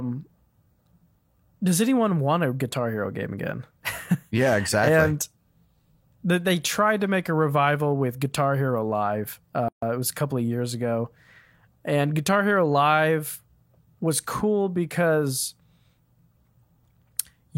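Separately encoded pieces of this speech recording were joined without trimming the encoder delay and final-frame padding, leaving a gap at a join of encoded pieces. The silent padding from both sides of the seam stays in, so at 9.68 s the speech drops out for about 140 ms, until 9.82 s. The edges are smeared by the codec, and the talker then resumes exactly where they stopped with "it was a couple".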